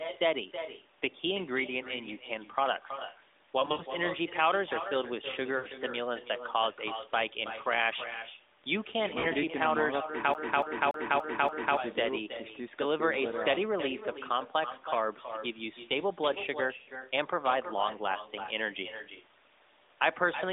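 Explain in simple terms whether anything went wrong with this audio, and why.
Echo with no canceller runs through the whole clip: the far end's loudspeaker feeds its microphone, so every phrase returns, quieter and hollow, about a third of a second later.

Lost AMR speech frames break up the speech at 3.60 to 3.83 s, 5.58 to 5.67 s, 9.20 to 9.27 s and 16.78 to 16.90 s. Radio errors wiped out short chunks, and the phone filled each gap by stretching the last good sound and fading it, giving brief warbles and dropouts.

A CD stuck on one turn appears from 10.34 to 11.77 s. A scratch makes the player jump back, so the same 0.29 s snippet repeats five times in a fast, even stutter with tiny gaps.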